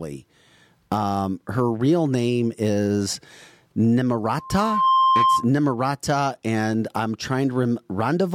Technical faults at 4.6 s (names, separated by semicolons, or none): loudspeaker feedback squeal